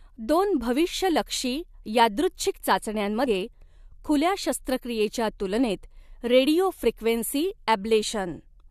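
Damaged data in a compressed stream at 3.26 s in this speech recording makes a brief blip, where corrupted frames are misread and the decoder loses sync, searching for the next frame header.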